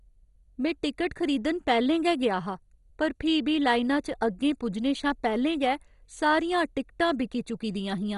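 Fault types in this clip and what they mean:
MP2 compression: The speech has a dull, gurgly quality with a grainy, watery roughness that runs the whole way through, and there's nothing at all above 11.2 kHz. That's most likely MPEG Layer II at a starved bitrate, roughly 56 kbps by the sound of it. The coder splits the signal into 32 sub-bands, drops the top ones when bits run short, and quantises what's left so coarsely that bands flutter in and out.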